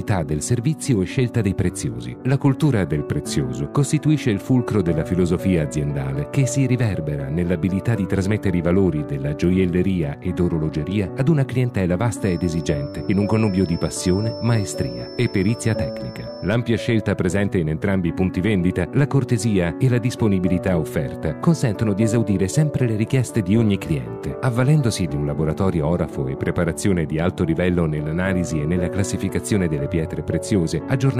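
From 12.17 to 16.58 s, a thin feedback whistle near 5.3 kHz sits well below the sound, swelling and fading slowly. Likely a speaker-to-microphone loop near instability.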